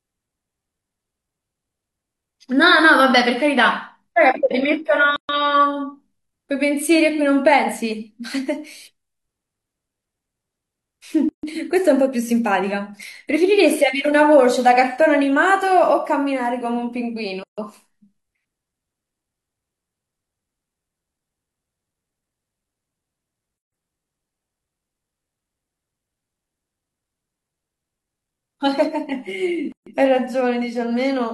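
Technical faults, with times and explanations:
5.16–5.29 s, 11.29–11.43 s, 17.43–17.58 s, 23.58–23.72 s and 29.72–29.87 s: gap at a join of encoded pieces. The speech drops into silence every 6 s, for 128 ms first, then 144 ms. Separately encoded pieces were butted together untrimmed, keeping each one's start-up delay and end padding. Edges are smeared by the codec, and speech resumes where it stopped.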